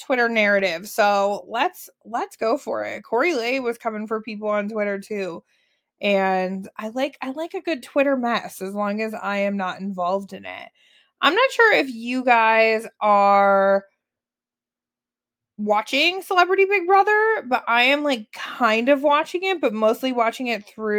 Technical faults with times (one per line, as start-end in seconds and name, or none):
none